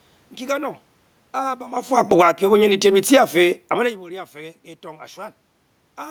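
From 1.36 to 2.36 s the automatic gain control is falling: having judged the input too loud or its background noise too strong, it pulls its gain down by about 9 dB over one second, so the speech and the room noise behind it sink together. A talker movement around 1.5 s overlaps it.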